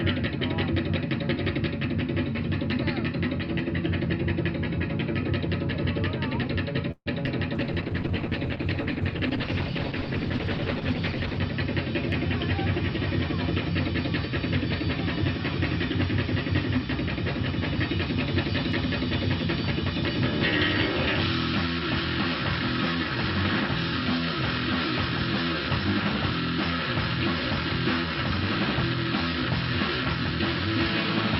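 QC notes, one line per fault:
6.91–7.08 s, call audio freeze: the sound stretches into a fading buzz, then about 50 ms of silence, likely from delayed packets draining the jitter buffer; audio resumes intact.
7.26 s, short concealed packet loss: about 20 ms never arrived, the gap patched by extending the preceding sound, leaving a brief smear before blending back.
7.55–11.46 s, call bitrate drop: encoding falls from 48 to 12 kbps for nearly four seconds, so the audio turns coarse, watery and dulled at the top.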